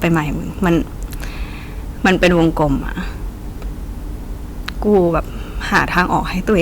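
A gain stage overloads four times, so speech peaks are cut flat in hard clipping: 0.04–0.18 s (about 4 dB over), 2.05–2.64 s (about 9 dB), 4.69–5.01 s (about 2 dB) and 5.74–6.62 s (about 9 dB). The milder overloads crackle on peaks, while the 9 dB ones turn loud sounds into harsh fuzz.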